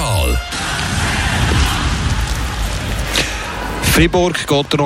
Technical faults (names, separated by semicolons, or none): Wi-Fi interference